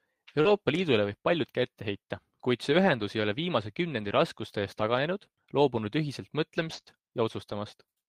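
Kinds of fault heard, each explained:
Short concealed packet loss: Brief stretches of the speech never arrived in time, so the receiver extended the preceding sound and blended it back into the real signal. Around 0.41 to 0.47 s about 40 ms were missing and roughly 33 ms were filled. Around 6.81 to 6.86 s a 20 ms hole was covered with about 30 ms of concealment. Each is heard as a short smear or wobble.
Lost packet rebuilt from error correction: Here lost audio was replaced by a lower-quality backup copy carried in the following data, so there is no gap, only a brief rough, noisier patch. Rebuilt stretches occur at 0.45 to 0.51 s (40 ms), 2.85 to 3.03 s (100 ms), 3.99 to 4.09 s (60 ms), 6.57 to 6.79 s (120 ms) and 6.86 to 6.92 s (40 ms). On a spectrogram these show as blurrier, grainier blocks with a hazier noise floor, while the waveform stays continuous.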